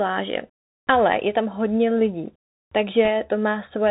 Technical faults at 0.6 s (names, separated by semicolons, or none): Bluetooth CVSD headset codec